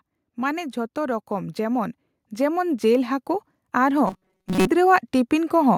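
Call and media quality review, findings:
Automatic gain rising, 0.35 to 5.73 s: speech and background noise swell together, about 10 dB overall. AGC in the capture path raising gain slowly on quiet input. The waveform envelope and noise floor climb steadily across the clip.

Robotic sound from repeated short buffers, 4.08 to 4.67 s: rigid metallic buzz near 188 Hz, most of the audio in that stretch replaced by repeats. Likely a jitter buffer or playout underrun looping about 5.3 ms of audio. The spectrogram shows evenly spaced harmonic lines, and the waveform shows repeating identical cycles.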